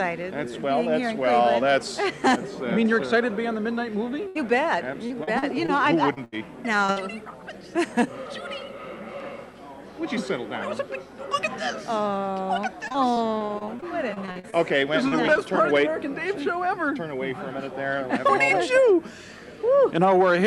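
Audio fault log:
4.27–4.37 s, burst of packet loss: roughly 80 ms went missing, so the last sound gets stretched and faded to cover it, then playback jumps ahead.
5.07–6.98 s, repeated packet loss (robotic sound): eight short holes, longest 78 ms, each patched by extending the previous sound, which gives that choppy stutter.
12.88–15.45 s, repeated packet loss (robotic sound): seventeen quick dropouts, none over 40 ms, repeatedly filled with continued sound, so this stretch comes out choppy and robotic.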